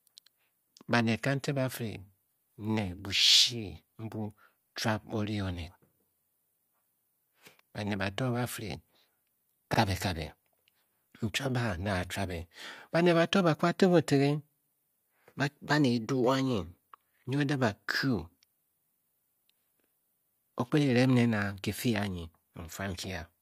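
At 9.74 s, overlapping chunks replay a 44 ms sliver at a join between 5-second blocks, heard as a brief stutter, a repeat rather than a gap.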